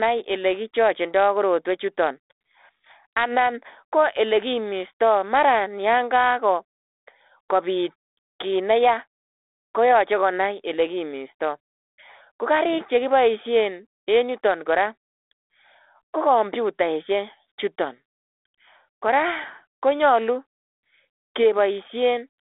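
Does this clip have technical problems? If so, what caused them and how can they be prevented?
No, there are no technical faults in this speech clip. It comes through a G.726 ADPCM telephone link at 32 kbit/s, with the band held to roughly 300 Hz to 3.6 kHz and only light coding hiss that follows the speech level.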